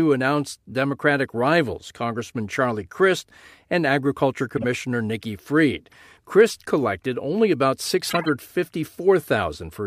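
Speech, with corrupt frames decoded: flipped bits in compressed frames were played anyway, leaving misplaced-energy chirps and noise bursts at 4.57–4.64 s, 5.92–5.95 s (faint), and 8.07–8.26 s after "collected only about", the loudest and longest.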